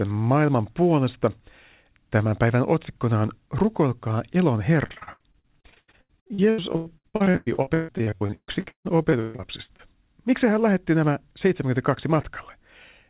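From 4.86 to 9.81 s there's repeated packet loss (robotic sound): dozens of dropouts, nearly half the stretch patched by stretching earlier sound, gaps up to 159 ms, so it goes choppy over the narrowband, 4 kHz-limited call path.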